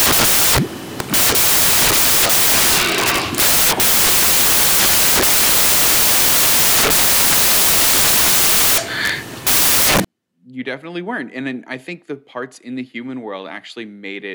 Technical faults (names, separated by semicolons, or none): samples built from the wrong bytes